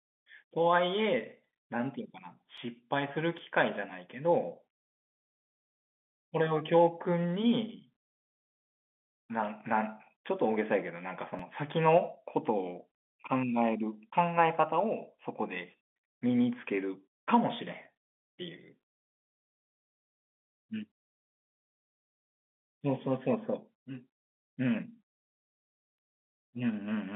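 Dropped buffer (overrun) jumps land at 2.58 s, 3.39 s and 11.39 s in this telephone-band speech clip, where the audio stays within roughly 200 Hz to 3.5 kHz. Each one is a jump with no gap of silence: a few milliseconds vanish at the first two and under 2 ms at the third. The likely cause is that the capture software fell behind, so the hardware overwrote unread samples and the audio on either side was joined directly.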